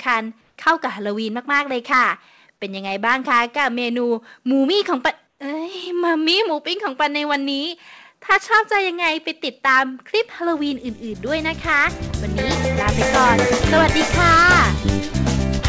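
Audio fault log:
0.41 to 0.56 s and 5.27 to 5.39 s, comfort noise in place of the background: in these 150 ms and 120 ms gaps, where the background sits about 48 dB and about 51 dB below the loudest sound, the real ambience gives way to a steady, featureless hiss, about 1 dB and about 4 dB quieter. This is likely discontinuous transmission: the sender paused, and the receiver synthesised shaped noise until sound resumed. Elsewhere the band stops at 8 kHz, consistent with a G.722 call codec.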